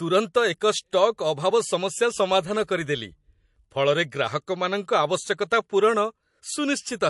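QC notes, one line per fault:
Throughout: MP3 compression is the likely cause. Nothing survives above 11.3 kHz, a hard treble ceiling that fits about 48 kbps, and weak frequency lines flicker frame to frame, leaving the speech watery and swirly, which a plain low-pass filter would not.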